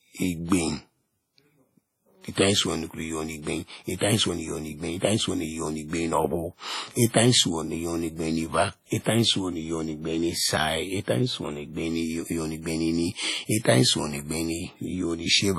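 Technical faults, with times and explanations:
throughout: WMA compression. The speech is heavily damaged: it rings and sounds washy, with a hiss that swells and fades along with it, and nothing remains above 14.5 kHz. The likely cause is WMA 1 encoding at a low bitrate that fits about 32 kbps. Long transform blocks spread quantisation noise across tens of milliseconds around each sound, and weak components are zeroed out. A spectrogram shows a hard ceiling at 14.5 kHz, patchy holes between harmonics and smeared onsets.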